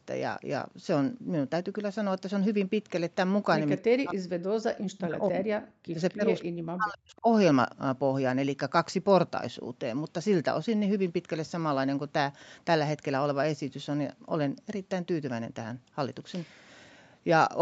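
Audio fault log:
3.78–5.48 s, 5.64–6.28 s, 6.46–7.26 s: speech suppressed in double talk. The speech drops by about 40 dB in pieces, likely an echo canceller turning down the near talker during overlap.
6.1 s and 6.4 s: echo leak. Brief delayed copies of the speech arrive 261 ms late, about 25 to 30 dB down, likely residual loudspeaker echo passing an echo canceller.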